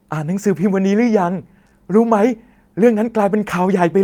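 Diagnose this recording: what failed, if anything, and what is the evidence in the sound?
Clock drift between sender and receiver sits at the network receive stage. The sender's clock runs roughly 3 percent slow, so the jitter buffer keeps draining. Unlike random packet loss, the small hiccups never let up across the speech and always lean the same way.

Repeated timing corrections run from 0.18 s to 3.96 s. The receiver keeps repeating short pieces to refill its buffer, which plays the stretch at 96 percent speed and adds around 150 ms. Pitch stays put, which separates this from tape-style speed wobble; only the tempo stumbles unevenly.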